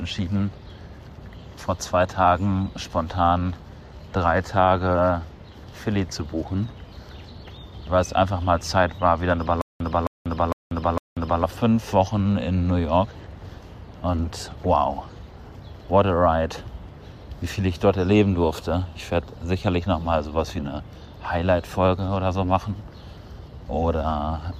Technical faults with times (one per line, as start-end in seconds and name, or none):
9.61-11.43 stutter with silent gaps